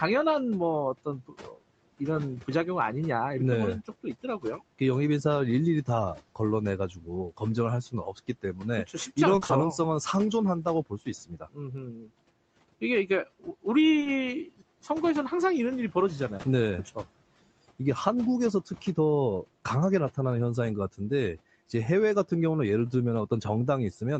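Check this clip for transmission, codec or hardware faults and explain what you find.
Yes, there are faults, and they fall into three groups. Most of the trouble comes from the noise suppressor, with a couple of spots of packet loss on top.

Speech cut by the noise suppressor happens at 1.05–1.62 s, 3.88–4.81 s, 5.86–6.39 s, 6.92–7.42 s, 7.91–9.17 s, 10.64–12.11 s and 12.81–13.66 s. In each span the suppressor mistook parts of the speech for background and pulled them down along with the room noise, by up to about 19 dB at the worst point. Only fragments inside each span are hit, up to about 0.7 s at most, and the longest stretch is near 11 s. You hear soft consonants and word tails going faint or swallowed.

Repeated packet loss (robotic sound) shows up briefly at 9.35–9.51 s. Over that sixth of a second, 20 ms holes kept arriving one after another. It fits four lost packets, and half the span ended up patched by continuing the previous sound. 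Because each patch runs straight into the next hole, the result is choppy, with bits of the speech simply missing.

Short concealed packet loss hits at 13.99–14.07 s and again at 16.37–16.45 s. Each time two consecutive 20 ms chunks failed to reach the decoder, so about 40 ms was missing. The receiver papered over it by extending the last sound and then blending back into the real audio. It comes across as a quick smear or wobble, and a short consonant there can vanish.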